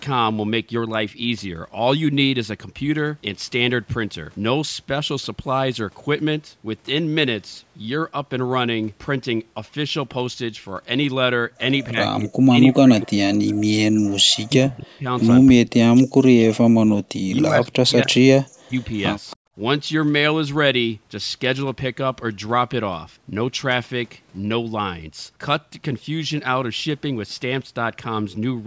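From 11.9 to 11.98 s the speech level dips by roughly 10 dB, then drops far harder in three longer stretches: 12.16 to 15.06 s, 15.53 to 16.89 s and 17.06 to 18.76 s. In each of these the speech falls by as much as about 40 dB. This pattern is likely speech suppressed in double talk. With both ends talking at once, the echo canceller could not separate the near talker from the loudspeaker echo, so it attenuated everything.

At 19.3 to 19.36 s a faint, short scrap of delayed speech appears, sitting about 30 dB below the main speech. It arrives roughly 277 ms after the original. This is likely an echo leak. The far end played the call on a loudspeaker, its canceller failed to remove all of what its microphone picked up, and the residue returned as a late copy.

Immediately after, from 19.39 to 19.52 s, the room background drops by about 40 dB for roughly 100 ms before returning. This is background gated by the echo canceller. 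While the loudspeaker was active, the canceller clamped the microphone down hard, taking the ambient sound with it until it released. The call's microphone processing limits the audio to nothing above 8 kHz throughout, which is expected.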